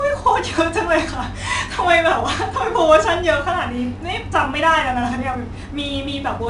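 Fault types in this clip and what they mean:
4-bit ADPCM compression: each sample is coded as a coarse 4-bit step from a running prediction, so the speech picks up a gritty hiss that rides along with the louder parts, plainly audible here, and nothing survives above 10.7 kHz, which fits a 22 kHz sample rate.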